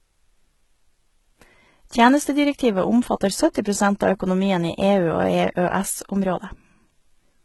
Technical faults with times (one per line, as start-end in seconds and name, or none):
0.00-7.44 HE-AAC compression
3.54 pre-echo